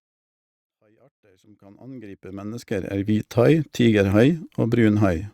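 No technical faults are present in the speech, and the level rises in a smooth fade from the opening to 3.2 s with no click or hard edge, just as an editor would shape it.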